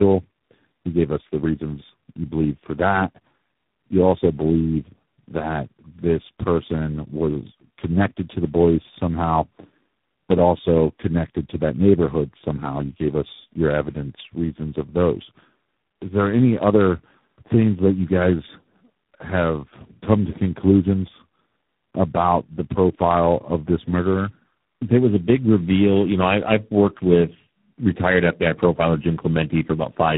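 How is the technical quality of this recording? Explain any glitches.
The quality is rough all the way through, and it's one problem rather than a string of separate glitches: tandem speech coding. The speech went through three low-rate codecs in sequence, G.729A, AMR-NB and G.726, with G.711 hops between them. Each codec re-encoded the previous one's degraded output, so the errors stack. That's why it sounds rougher, duller and more warbly than any single codec would, with nothing above 3.8 kHz.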